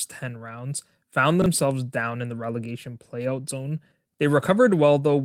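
A speech clip with a brief garbled, jumbled moment between 1.42 and 1.46 s, just after "rounds found" and before "down in the relegation". These are chunks out of order: one 20 ms chunk arrived one chunk late and played after its successor, nothing lost, but leaving three hard joins.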